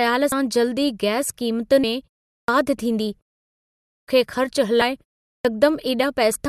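A speech clip with two separate problems going on. First, compressed frames are skipped at 0.32, 1.83, 4.81 and 6.35 s. Each time the audio lurches forward, losing something like 70 ms, 150 ms, 400 ms and 300 ms. The jumps come in steps of a 26.1 ms frame. Second, there's a clipped start after a pause at 2.35, 3.92 and 5.31 s, coming after gaps of 0.35, 0.79 and 0.35 s. About 132, 157 and 139 ms of the opening is swallowed, so the speech snaps in without its first sounds, most likely because the output device dozes off in the quiet and takes a moment to wake back up.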